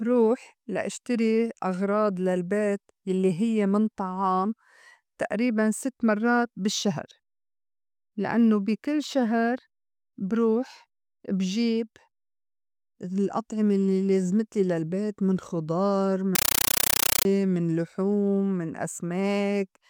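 From 16.35 to 17.25 s, just after "لازمتلي للبيت من خُضار", the speech gives way to very loud, chattering static: bursts of roughly 9 ms of noise, each followed by silence, 31.25 times a second. This is a compressed stream played as audio. An encoded Dolby Digital (AC-3) stream, which fits a 448 kbps rate, was taken as ordinary samples instead of being decoded.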